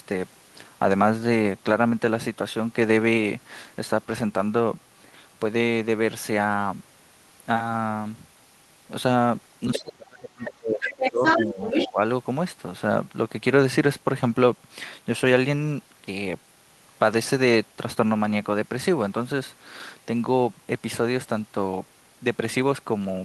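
A speech clip where the talker gets speech suppressed in double talk from 9.66 to 11.62 s, dipping by roughly 25 dB, and again briefly at 11.86–11.99 s. That's likely an echo canceller ducking both sides while the far end talks. The other side's voice leaks through at 9.73–9.80, 10.42–10.48, 10.80–11.46 and 11.64–11.88 s, the longest stretch about as loud as the talker or louder, likely residual loudspeaker echo the canceller missed.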